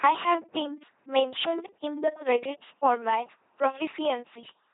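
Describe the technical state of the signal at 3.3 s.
At 3.3 s the speech is still passing through an LPC-10 vocoder, a fault present across the whole clip. The system has discarded the real waveform and rebuilt each instant from a small all-pole vocal tract filter driven by either a pulse train or noise, consistent with a 2.4 kbit/s rate. The damage is heavy: the voice comes out buzzy and robotic, with nothing above 3.8 kHz, so it sounds dull.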